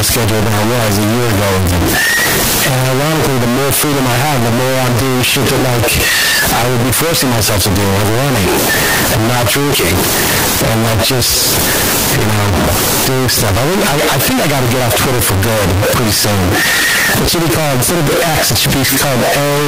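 Throughout, the speech is harsh and painfully loud, with quiet gaps as loud as speaking. This is likely signed and unsigned mixed up in the 16-bit samples, so every zero crossing leaps full scale.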